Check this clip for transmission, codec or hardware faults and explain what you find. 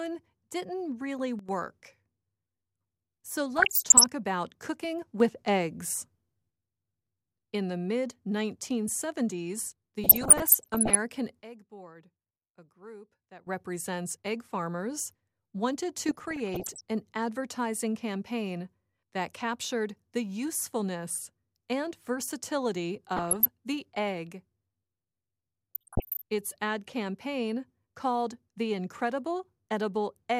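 Two kinds of fault show up: three sudden gain jumps and five stretches of DAB burbling.

Sudden gain jumps occur at 1.39 to 1.49 s (down about 12 dB), 5.20 to 6.50 s (up about 6 dB) and 11.42 to 13.47 s (down about 15 dB). The level steps abruptly, with sound and background shifting together, likely from a gain change applied without a ramp.

DAB burbling occurs at 3.56 to 4.04 s, 10.04 to 10.95 s, 16.09 to 16.81 s, 23.16 to 23.48 s and 25.75 to 26.22 s. Bit errors, roughly 0.4 to 1 percent, slip past error correction into the MP2 data, so wrong samples put short blips of noise in single sub-bands, and wrong scale factors make sub-bands jump in level for up to a frame.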